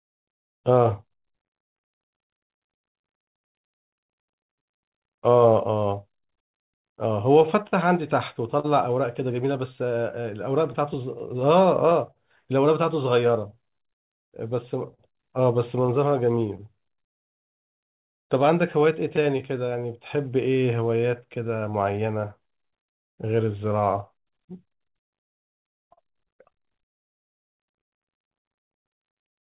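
From the very start there's clock drift between sender and receiver: the sender's clock seems to run slow, somewhere around 4% behind the receiver's. That means the jitter buffer keeps running low, and the receiver has to keep covering for audio that hasn't arrived yet. It's a steady background problem under the whole clip, and it's what drives the timing unevenness you hear throughout.

The result is repeated timing corrections, running from about 0.37 s to 28.74 s. The receiver keeps stretching things out by repeating little slivers of audio, which slows playback to roughly 99% speed and adds about a fifth of a second in total. Each edit is tiny and they're unevenly spaced, so the speech just sounds slightly unsteady in tempo, with a faint hiccup here and there.

On top of that, there are scattered short gaps in four stretches: 0.40–8.67 s, 9.76–12.18 s, 13.27–22.95 s and 24.09–28.84 s. 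Each stretch has somewhere between ten and twenty small holes, none longer than about 40–50 ms. In every case the receiver papered over the hole by carrying the last sound forward, so you get brief smears or ticks rather than silence. It all plays back through a narrowband call path with nothing above 4 kHz, which fits G.711.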